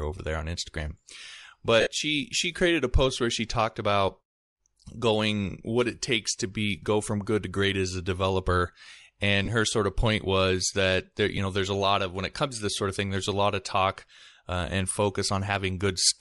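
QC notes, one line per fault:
Throughout, Bluetooth LC3 compression: the speech carries a plainly audible breathy, grainy edge, with the upper frequencies sounding hissy rather than crisp. This is likely the work of the LC3 transform codec. At this rate it discards much of the high spectrum and substitutes shaped noise, so detail up top is replaced by texture. The damage fits a bitrate around 48 kbps with short 7.5 ms frames.
1.80 to 1.87 s, 9.45 to 9.49 s and 11.37 s, lost LE Audio frames: each spot becomes a brief noisy smear where the speech blurs into hiss instead of cutting out. The first lasts 60 ms and thins as it goes, the second 22.5 ms, the third a single 7.5 ms blip. The decoder repeats the last spectrum with scrambled phase and then fades it, which fits roughly eight, three and one dropped frames.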